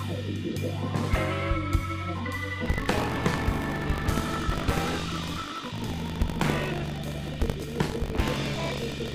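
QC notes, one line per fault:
2.64 s to end: buffer tearing, a 50 Hz rattle as part of each period replays stale audio, with vertical spectrogram seams every 20 ms.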